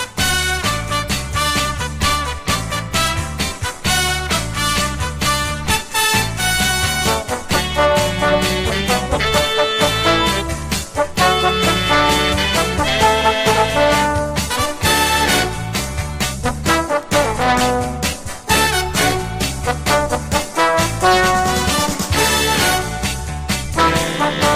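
No technical faults detected.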